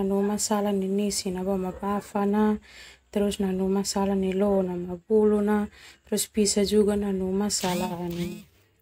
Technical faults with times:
none

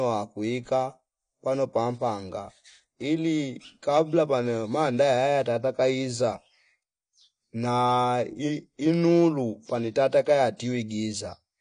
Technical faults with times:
0.00-11.60 AAC compression

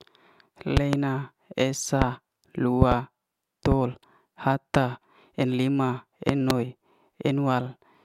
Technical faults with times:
0.77-0.96 loud pop
2.02-2.04 loud pop
2.82-2.94 loud pop
3.72-3.74 loud pop
6.29-6.53 loud pop

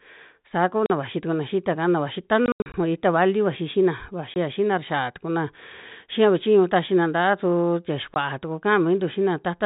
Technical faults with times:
0.86-0.90 packet loss filled with silence
2.46-2.74 packet loss filled with silence
4.34-4.36 packet loss filled with silence
8.14 packet loss filled with silence

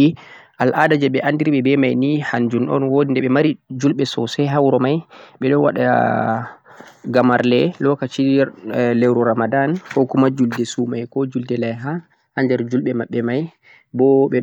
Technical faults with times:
0.80-0.94 hard clipping
4.59-4.75 hard clipping
7.17-7.40 hard clipping
10.01 hard clipping

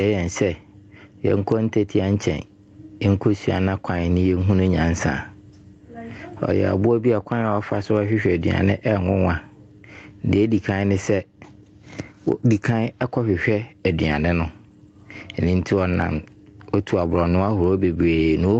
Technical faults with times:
0.00-18.60 gain pumping

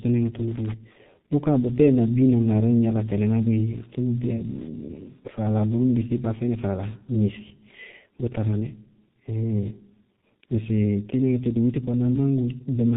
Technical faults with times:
0.00-12.96 G.723.1 codec

